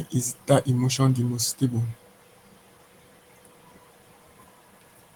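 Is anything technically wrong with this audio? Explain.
No, nothing stood out as technically wrong on listening to this speech clip.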